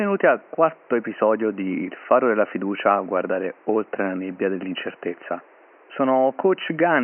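Nothing stood out on listening, with only a faint room noise sitting about 31 dB below the speech.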